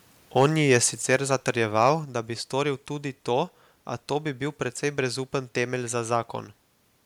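From 0.38 to 0.77 s the speech shows microphone overload: the loudest peaks push about 2 dB past the converter's limit and their tops are flattened, giving a harsh, crackly edge to those syllables. Under one percent of samples are affected, most likely from input gain set too high at the converter. At 1.02 s the microphone volume steps down by about 5 dB in a single jump, with voice and background dropping together, likely the call software reacting to that clipping.

Overload returns from 1.81 to 1.89 s, just before "da bi storil tudi", again about 2 dB over, with around one and a half percent of samples cut. A second step down follows at 2.04 s, about 3 dB, again right before "da bi storil tudi", as the gain is pulled back once more.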